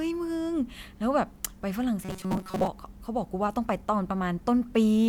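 From 2.03 to 2.67 s the speech collapses into a rigid, metallic buzz at 188 Hz that only loosely tracks the words: robotic sound from repeated short buffers. It's likely caused by audio arriving too seldom, so a roughly 5.3 ms buffer was replayed over most of that stretch.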